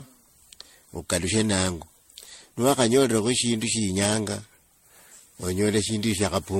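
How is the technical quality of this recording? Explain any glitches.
The speech carries generation loss for its whole length, most likely from being passed through an MP3 encoder around seven times. The band stops near 16.5 kHz, which fits a 64 kbit/s MP3. Each pass requantises on a shifted frame grid, so noise and spectral holes pile up. The result is swirly, hollow and smeared, with blurred consonant attacks. That is worse than a single 64 kbit/s encode would sound, and it is what separates it from plain low-bitrate compression.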